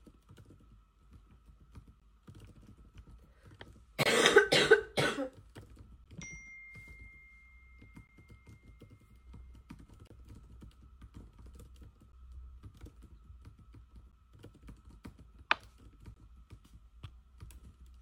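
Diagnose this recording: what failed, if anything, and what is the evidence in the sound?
Playback stage, gap between stream segments: hard-edged silences at 2.00, 4.03–4.06, 6.04, 8.07, 10.07–10.10, 12.12, 14.12 and 16.14 s, one per 2-second segment, lasting 12–30 ms. Mismatched segment timestamps leave holes padded with silence, seen as flat waveform notches and blank vertical spectrogram stripes.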